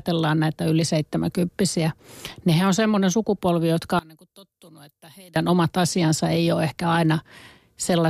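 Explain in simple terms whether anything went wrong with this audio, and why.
One channel inverted is the likely cause of what happens from 3.99 to 5.36 s, just after "on semmoinen sukupolvi jotka" and until "omat asiansa ei ole". For that stretch the speech drops away sharply and only a faint trace remains. When one side of a stereo recording is flipped upside down and both sides are combined, the voice they share cancels itself out, leaving only their small differences.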